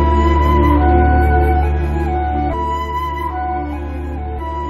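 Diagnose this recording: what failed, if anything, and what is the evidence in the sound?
The failure is in the codec stage: damaged data in a compressed stream. Two brief disruptions are audible, one from 2.52 to 2.54 s, lasting about 22 ms, and one at 4.38 s. At each point the decoder hit corrupted frames, misread or discarded them, and had to resynchronise on the next valid frame header. Unlike analogue crackle or a buffer underrun, the disruption comes from decoding corrupt frames, so the sound at those moments is garbled or missing rather than merely interrupted.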